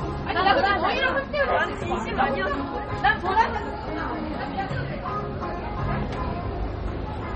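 MP3 compression throughout this everyday sound: nothing above 8.3 kHz, with plainly audible watery swirl, likely from heavy MP3 encoding, which fits a bitrate around 32 kbps.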